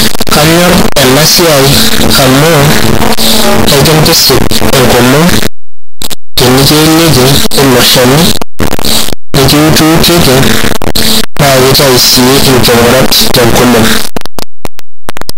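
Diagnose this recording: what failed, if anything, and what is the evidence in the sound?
Sample-format conversion: harsh, very loud distortion throughout, soft sounds as loud as syllables, unlike clipping; likely signed and unsigned 8-bit samples mixed up, flipping each top bit.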